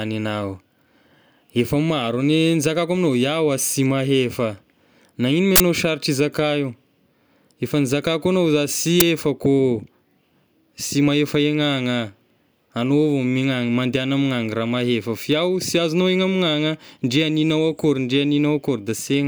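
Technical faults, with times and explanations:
5.56 to 5.60 s, uninitialised buffer: a roughly 43 ms burst of harsh digital noise just before "sarotra izaka io". An output block was sent to playback before any audio was written into it, so whatever data remained in that memory was played as samples. Its length fits a 2048-sample buffer.
9.00 s, uninitialised buffer: a shorter, roughly 11 ms noise burst right after "efa nizakako agnao za". The same mechanism applies, with stale memory read out as audio, and here the length fits a 512-sample block.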